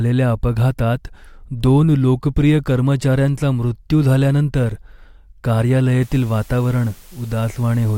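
From 6.02 s to the end at 7.97 s, a steady, even hiss sits under the speech with no grit or distortion, around 30 dB below it. This is low bit depth with dither: the signal is reduced to 7 bits, and dither added before rounding turns the quantisation error into constant white noise.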